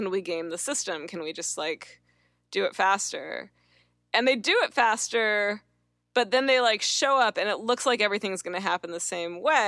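No technical faults are audible.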